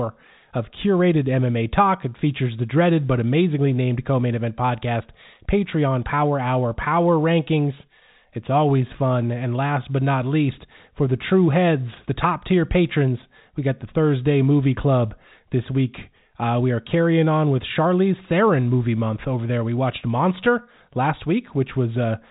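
No technical faults are audible.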